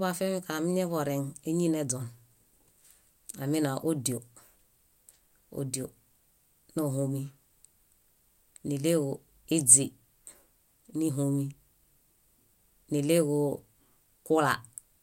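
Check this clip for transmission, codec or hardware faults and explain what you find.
Nothing in the speech points to a transmission, codec or hardware problem: the signal holds steady and continuous across the whole clip, with no audible disturbance from the path that carried or recorded it.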